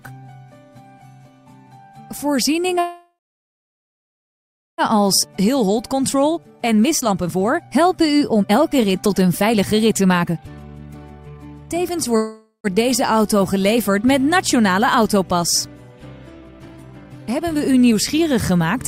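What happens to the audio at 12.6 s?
A call audio freeze runs from 12.17 s to 12.67 s, so 12.6 s falls near its end. The sound likely stalls because packets were held up in transit and the jitter buffer ran dry. The receiver stretches the last sound into a fading buzz for about half a second, and the final 110 ms or so is silent. The audio then resumes exactly where it stopped, with nothing lost but everything after arriving about 0.48 s later.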